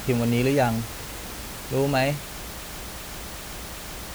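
Short speech recording with a broken-record loop from 2.62 s to the end: a 0.38 s chunk repeats four times back to back, and the audio that should follow is gone. Likely the player or stream stalled and kept resending its last fragment. Room noise sits about 15 dB below the speech.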